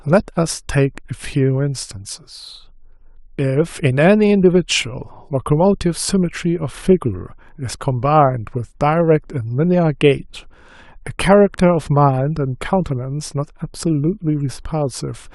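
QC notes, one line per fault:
Nothing to flag here; the speech comes through without any technical trouble worth noting.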